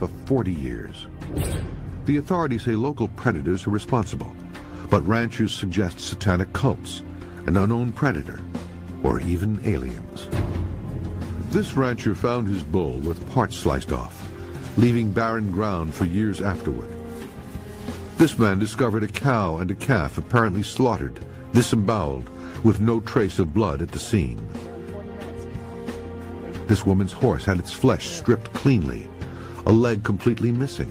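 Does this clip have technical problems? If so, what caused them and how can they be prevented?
No, nothing stood out as a technical problem on listening, so there is nothing here to trace back to a cause or guard against.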